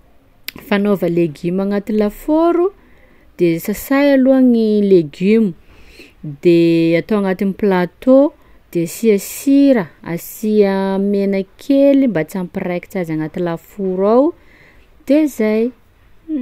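No technical faults can be heard anywhere in this recording of speech.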